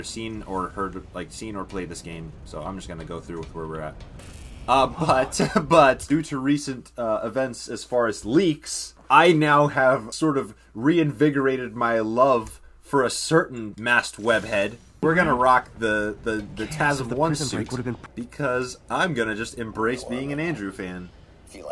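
No technical faults can be heard anywhere in this recording.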